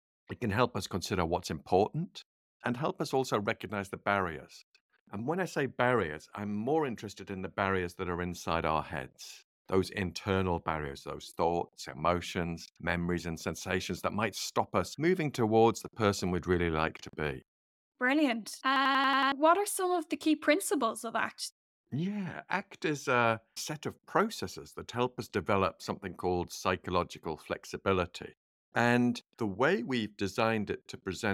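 A speech recording with a system hang loop from 18.76 to 19.32 s: one 92.9 ms slice of audio repeats exactly six times, a machine-gun stutter at about 10.8 Hz, while around half a second of the speech never arrives. The loop length fits a 4096-sample ring buffer replayed while the system froze. Unlike a plain dropout or packet-loss concealment, nothing goes silent or gets smoothed over; the same fragment returns with identical content each cycle.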